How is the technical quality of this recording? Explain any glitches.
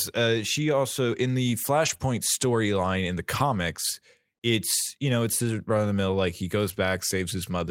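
There are a few network-loss glitches, all clustered in two short spots.

Around 1.85 to 1.95 s, again at 2.01 to 2.03 s, and at 3.35 to 3.41 s, you hear lost packets rebuilt from error correction. The speech gets briefly rougher and grainier rather than dropping out. The next packet each time carried a low-bitrate backup copy, and the decoder played that instead. The 100 ms stretch points to about three missing packets. The later one points to about two.

At 1.97 to 2.01 s, wedged between those first repairs, there's a short concealed packet loss. Roughly 20 ms simply never arrived. The receiver papered over it by extending the preceding sound before blending back into the real signal. It comes across as a quick smear or wobble right in the middle of the rough patch.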